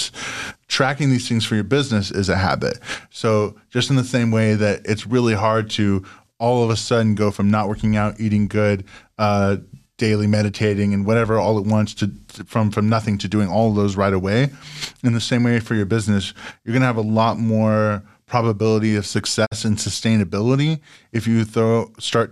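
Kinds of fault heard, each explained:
Digital broadcast dropout: the receiver stopped getting valid frames and muted, so the speech fades out over about 20 ms near 19.45 s and resumes by 19.53 s. The missing 48 ms fits two dropped frames, and that programme material is simply gone.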